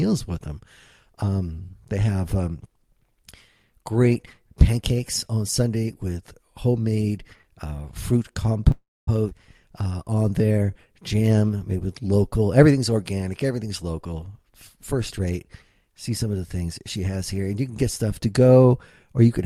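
Call audio freeze, 8.71 to 9.09 s: the sound stops moving forward for about 0.36 s. The last sound is carried on as a fading buzz that falls to silence for roughly 0.23 s before the audio resumes exactly where it left off, with nothing lost. The likely cause is packets held up in transit, which let the jitter buffer run dry so the receiver had to fill the wait with an extension of what it last had.

Skip ahead, 9.29 to 9.33 s: playback lurches forward and roughly a fifth of a second of audio is simply gone. The two sides are stitched together with only about 16 ms of fill, so the join is nearly direct and the jump is abrupt. A stretch of audio was dropped while later material was already queued, and the receiver went straight on to it, shedding a large part of the delay the freeze had just added.

Jitter buffer slow-down, 9.71 to 11.04 s: the audio plays at about 88% of normal speed with its pitch unchanged, so sounds are drawn out and a faint warble can creep in. 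The buffer was short of reserve, and the receiver rebuilt it by repeating single pitch periods and slivers of pauses many times in a row. Across this stretch about 167 ms of audio is added.

Jitter buffer speed-up, 14.45 to 15.45 s: the audio runs a little fast, at about 105% of normal speed with its pitch unchanged, giving a slightly hurried quality. The buffer was holding more audio than its target, and to trim the excess delay the receiver cut out short pieces of one or a few pitch periods in quick succession. In total around 70 ms is removed over this second.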